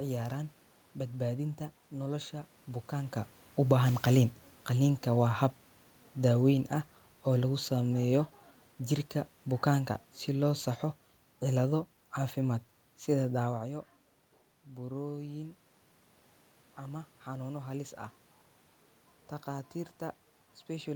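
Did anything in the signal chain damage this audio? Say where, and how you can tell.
Yes. Automatic gain falling in the call processing stage: from 3.56 s to 8.29 s the level sinks by about 6 dB, and the room noise drops with it. The gain control judged the input too loud or its background noise too strong, and eased its gain down.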